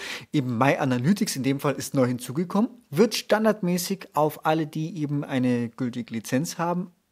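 No technical faults can be heard at any point in the speech, and the signal stays steady and continuous throughout.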